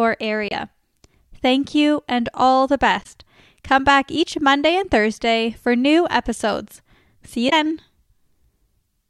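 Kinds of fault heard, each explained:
Damaged data in a compressed stream: corrupted bytes make the decoder misread frames and lose sync, causing 40 to 70 ms glitches at 0.49 s, 2.99 s (after "you and all the") and 7.46 s.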